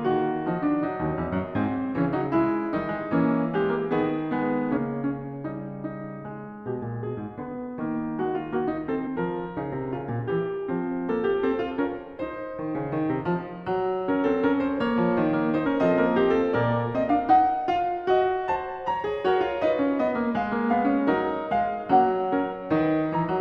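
Compressed frames skipped at 4.76, 9.06 and 15.65 s: the music jumps forward by whole 23.2 ms frames, roughly 70, 150 and 100 ms of audio lost, as the decoder drops missing or damaged frames.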